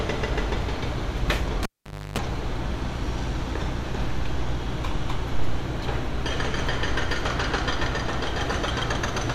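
A cable pulled and plugged in runs from 1.63 to 2.18 s. A live lead was yanked out mid-signal, giving a sharp pop before the sound drops to near silence for about 0.50 s. As the plug goes back in, the tip makes contact before the sleeve grounds it, so for about 0.30 s the line picks up a rough 50 Hz mains buzz. A second pop marks full seating, and the sound returns.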